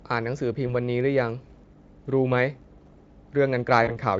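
VoIP packet loss concealed by the speech codec at 0.67–0.74 s and 3.83–3.99 s: the decoder extrapolated across missing 20 ms frames, smearing the speech into a brief, fading buzzy tone or coloured noise.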